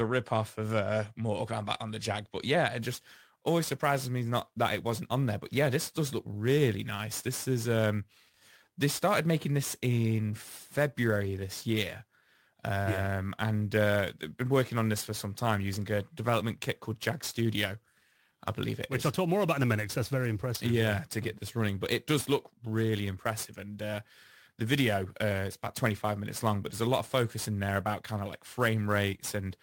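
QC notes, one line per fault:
2.79 s to end, after "yeah it": sample clock jitter. Timing wobble of roughly 10 µs misplaces samples, causing error that tracks waveform slope. This heard as hiss around 20 dB under the speech, loudest on bright syllables and absent in pauses. The spectrogram shows high-frequency haze only where speech sits.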